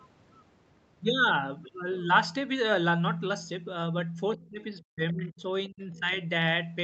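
From 4.34 to 5.41 s the speech sinks sharply, dropping by roughly 25 dB at its deepest, with about 0.7 s of that stretch affected. It comes back and then dips again from 5.68 to 6.11 s, this time by roughly 20 dB over about 0.3 s. This is speech suppressed in double talk. The likely cause is an echo canceller that was hearing both the local talker and the far side at once. Unable to tell them apart, it turned the whole microphone signal down. On a waveform both spans look pinched or gouged out. On a spectrogram the harmonic bands fade and break into fragments, with the upper part of the band, which already stops at 8 kHz on this call path, thinning.

Inside that second dip, from 5.94 to 5.99 s, there is a brief scrap of the other side's voice leaking through. It sits roughly 30 dB below the talker, so it is heard only as a faint flicker of a second voice. It is likely residual loudspeaker echo that the canceller failed to remove. 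On the spectrogram it shows as a tiny, faint smear of energy about 50 ms wide, unrelated to the surrounding harmonics.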